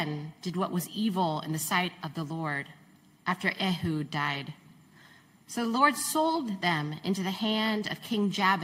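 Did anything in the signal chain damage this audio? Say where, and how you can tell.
No, nothing in the signal chain damaged this audio.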